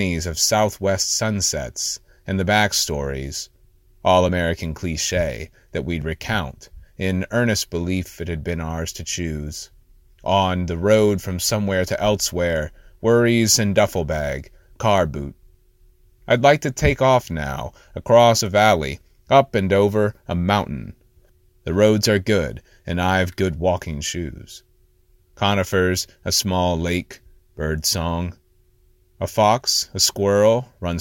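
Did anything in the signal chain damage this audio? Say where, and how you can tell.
Yes. At 1.02 s, just before "sunsets and the backstories", and at 6.02 s, 18.41 s and 29.68 s, the sound jumps forward with no gap. These are most likely dropped buffers (overrun) at the driver or buffer stage: capture samples went unread before being overwritten, so the two sides join directly. About 40 ms goes at the first point and about 20 ms at the others. The missing silence is what separates this from a network dropout or a muted gap.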